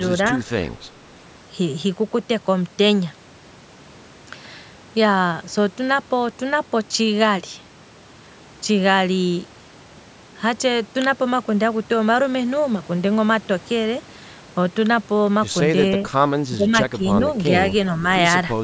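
An echo canceller likely mistook overlapping talk for echo, causing speech suppressed in double talk: the speech dips roughly 10 dB at 16.55–16.73 s and 16.97–17.02 s.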